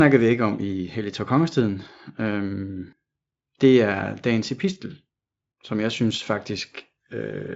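Nothing in this speech stood out as a technical fault on listening.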